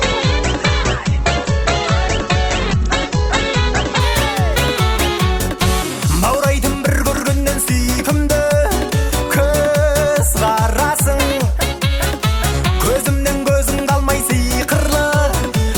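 The audio shows an adaptive stream starting at a low bitrate: from 0.0 to 4.0 s nothing sounds above 8.2 kHz and codec artefacts are stronger, which fits a low-rate Opus rendition stepping up to a higher one. Unlike a rebuffer, the improvement is sudden and gapless.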